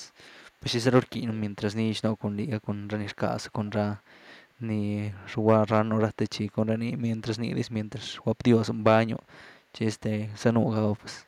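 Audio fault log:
1.33–1.54 s and 3.66–3.70 s, echo leak: a faint, delayed copy of the speech comes back about 161 ms after the original, a short scrap first and then a brief blip. It sits well down, roughly 25 to 30 dB under the speech. The likely cause is a far end on a loudspeaker whose echo canceller let a bit of its mic pickup through and sent it back to us.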